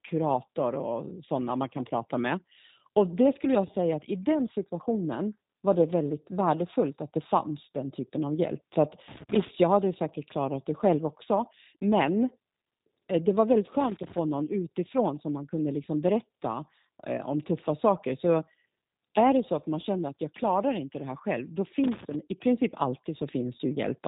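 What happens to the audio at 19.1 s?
At 19.1 s, as across the whole clip, the speech carries G.729 codec damage. The codec rebuilds the speech from a filter, pitch and sparse pulses, which sounds rough and synthetic and fits 8 kbit/s. On a spectrogram, nothing appears above about 3.8 kHz.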